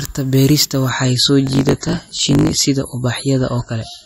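At 0.89 s the speech abruptly changes quality with no gap or dropout, and stays swirly with codec artefacts to the end. This is an adaptive stream at a lower bitrate. The connection slowed and the player switched to a cheaper encoding, one that sounds like a step from roughly 128 down to 32 kbit/s MP3.

From 1.45 to 2.67 s a steady 50 Hz buzz sits under the speech. Over the same stretch the talking runs about 1.07 times too fast while the timbre stays essentially normal. That combination is a block size mismatch (truncated). One stage writes blocks longer than the next one reads, which fits 1024-sample blocks, and the surplus tail of each block is discarded. The regular cut points produce the buzz, and the lost material shortens time.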